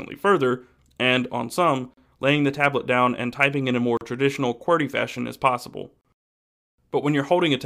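At 1.94, 3.97 and 6.01 s the sound drops out for about 37 ms, every 2 s: a gap at a join of encoded pieces. Each chunk kept its encoder start delay and end padding, so silence opens with smeared edges, then the sound resumes where it stopped.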